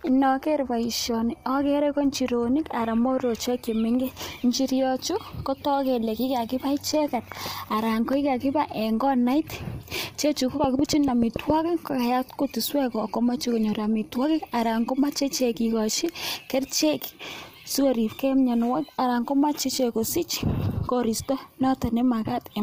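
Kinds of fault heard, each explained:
Low-delay AAC compression: The speech has a rough, grainy texture throughout, with noise filling the gaps between harmonics and nothing above 15.6 kHz. This points to a low-delay AAC coder, likely AAC-ELD, running at a low rate that fits about 32 kbps. At that rate too few bits are left to code the detail between harmonics. So the damage is plainly audible across the whole clip.
Train of clicks: From 10.64 to 11.51 s a run of sharp pulses sits on top of the speech. There are about seven of them. They arrive at a steady rate of about 7 per second and are evenly spaced. Each click has much the same shape and peaks roughly 15 dB above the speech. The result is a regular ticking. The likely source is interference from nearby equipment or a faulty connection or power supply.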